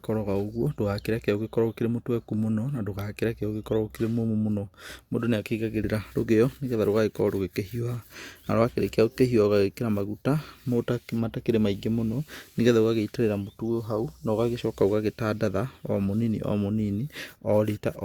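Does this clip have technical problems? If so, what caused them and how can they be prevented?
No, there's nothing wrong on the technical side here, so there's nothing to trace back or guard against.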